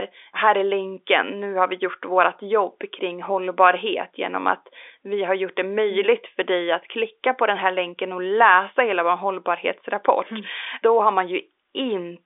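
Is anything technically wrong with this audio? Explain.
No, nothing technically wrong can be heard here.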